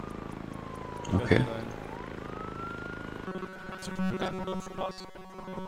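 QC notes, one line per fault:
3.28 to 5.67 s, robotic sound from repeated short buffers. The sound turns into a rigid, metallic buzz at a fixed pitch of 188 Hz and stays that way to the end. The rough shape of the sound still comes through. The cause is likely a starved playback path. It keeps looping a slice of about 5.3 ms, which sets the 188 Hz pitch. Much of the real audio, roughly two thirds, is skipped.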